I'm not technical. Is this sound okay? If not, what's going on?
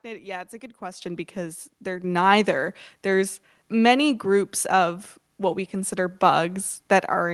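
No, not quite. The main thing is the microphone volume being stepped up, twice. The calling software decided the mic was too quiet and turned it up in one jump rather than gradually, so the voice and the background get louder together all at once. The first jump is at about 1.02 seconds, between "yeah it's a good" and "because they're", and it's the bigger of the two. A second, smaller jump follows at about 2.04 seconds, just after "because they're".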